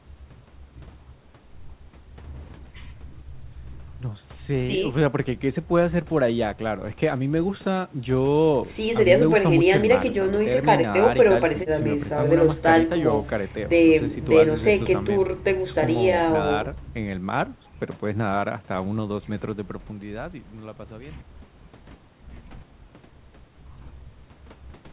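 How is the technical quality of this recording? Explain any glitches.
No technical faults are audible.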